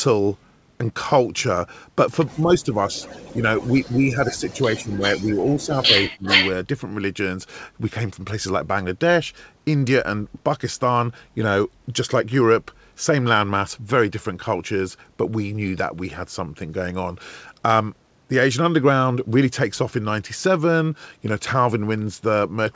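From 2.35 to 2.88 s, the echo canceller likely mistook overlapping talk for echo, causing speech suppressed in double talk: the voice dips by about 10 dB. From 2.9 to 3.89 s, an echo leak likely got past the canceller, returning a faint copy delayed 337 ms, about 25 dB down. From 3.34 to 6.23 s, suppression likely returns, cutting the voice by about 15 dB in pieces totalling roughly two seconds. From 4.5 to 6.52 s, the leak is likely back, its 337 ms echo now roughly as loud as the speech, with nothing above 8 kHz from the G.722 path.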